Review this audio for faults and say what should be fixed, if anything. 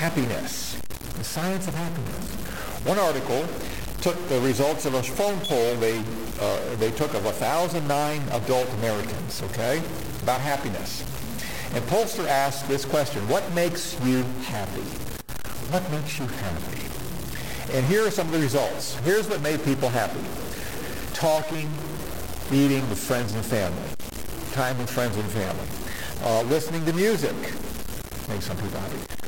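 A stuck bit is the likely culprit: one bit in the sample data is pinned at a fixed value by a broken data line or faulty converter, so roughly half the samples are pushed off by a step of about -25 dBFS. Throughout the clip this produces a harsh, buzzy distortion whose pattern tracks the waveform. Because the error flips with the sign of small values, quiet passages fill with a prominent noise floor instead of falling silent. Checking converters and digital interconnects with a low-level ramp or bit-pattern test signal before recording, and replacing any faulty cable or converter, would prevent it.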